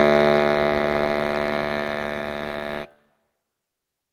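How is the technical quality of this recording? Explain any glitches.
The technical quality is compromised by a speech noise suppressor running over the music. Throughout the clip, the level pumps and flutters: note attacks come through, but held tones, ambience and reverb tails keep sinking and recovering, with swings of roughly 10 dB. This is a noise suppressor applied to music. Built for speech, it treats anything steady or decaying as background noise and keeps pulling it down, so the music sounds unstable and thinned out.

From 1.99 to 3.09 s, the sound is cut by the noise suppressor more heavily than elsewhere, for about a second in total. Sustained material there dips by about 8 dB at its deepest, and decays are clipped short, leaving a hollow, gated stretch. The processor judged this passage to be noise and attenuated it harder than the surrounding music, while only the sharper onsets kept their level.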